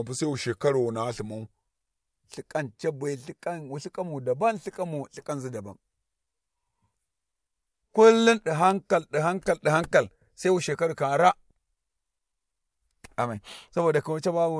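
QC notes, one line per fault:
0.00–1.63 s, wrong sample rate: the opening is played back slower than it was captured, with no resampling, so speed and pitch drop together. It runs at about 0.92x speed and sits roughly 1.5 semitones low, which makes the speech sound a bit heavy and dragged. That ratio fits audio recorded at 24 kHz being played at 22 kHz. It clears up right after 1.63 s.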